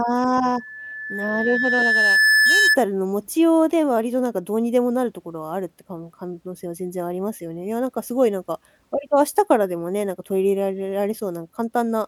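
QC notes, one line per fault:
0.45–2.78 s, loudspeaker feedback squeal: a single tone at 1.7 kHz swells out of the speech over roughly two seconds and ends up a few decibels louder than the speech itself before stopping at 2.78 s. The microphone is hearing its own loudspeaker, and at 1.7 kHz the gain around that loop is above one, so each pass reinforces the tone until it dominates.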